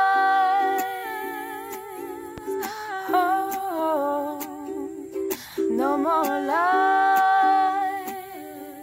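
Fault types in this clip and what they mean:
Loud pop: one sharp pop at 2.38–2.40 s, several decibels above the sound, which continues beneath it, likely from a brief voltage pulse from a plug, switch or static. The waveform shows a narrow spike; the spectrogram, a thin broadband vertical stripe.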